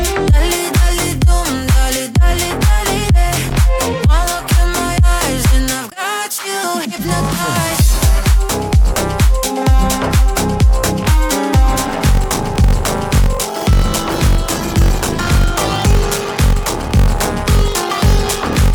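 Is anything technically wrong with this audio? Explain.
Yes. From 11.83 s to the end, a padded block size mismatch zero-fills each 1024-sample read block, causing a 46.9 Hz buzz and playback slowed to 0.861× with the timbre unchanged.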